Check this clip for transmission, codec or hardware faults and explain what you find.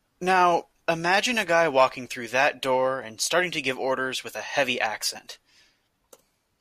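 No faults can be heard anywhere in the recording. Nothing in the speech points to trouble in the transmission path, the encoding or the recording hardware.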